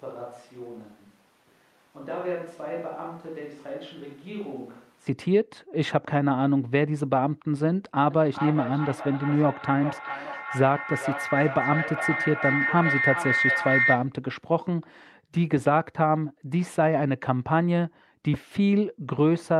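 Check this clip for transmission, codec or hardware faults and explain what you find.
Two faults are present, both affecting the speech directly.

From the start until 5.07 s the sound is roomy, hollow and thin in the bass, about 10 dB quieter, with background noise only about 25 dB below the speech. This is likely a switch to a distant microphone, a far-off pickup standing in for the close one. The waveform is visibly smaller, and the spectrogram shows weak low end and a raised noise floor that clears at the change.

From 8.1 to 14.19 s there is feedback howl: sound loops from loudspeaker back into a microphone, gaining level on each trip, so it grows into a tone around 2 kHz, with repeats roughly every 0.4 s, peaking about 2 dB below the speech. The spectrogram shows a bright horizontal line.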